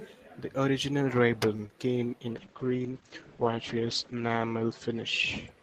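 At 1.56 to 1.60 s, just before "came in", a late packet emptied the jitter buffer, giving a short stall: the receiver held the last sound about 27 ms until the packet arrived, so nothing is lost but the sound drags briefly. At 1.66 to 1.68 s and again at 1.68 to 1.70 s, short concealed packet loss left about 10 ms missing each time; the decoder extended the preceding sound to cover the gaps, leaving a smear or wobble right before "came in". From 2.34 to 5.56 s, after "came in", a call bitrate drop forced the encoder from 40 down to 12 kbps, and the bandwidth narrowed from 20 kHz to 8 kHz. The speech turns muffled and watery, at its worst for about 1.9 s.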